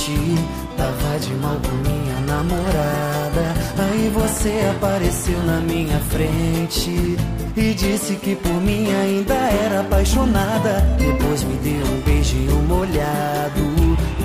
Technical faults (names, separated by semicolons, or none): none